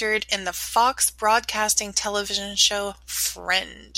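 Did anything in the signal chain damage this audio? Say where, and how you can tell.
Yes. At 2.04 s the speech is interrupted by a single short chirp-like blip, a few milliseconds long and peaking at roughly -25 dBFS, unrelated to the surrounding sound. This is a corrupt frame decoded, a codec-stage fault: bit errors in one compressed frame scrambled its gain or spectral codes, and the decoder rendered it anyway, so energy landed at wrong frequencies for just that frame's duration before clean frames resumed.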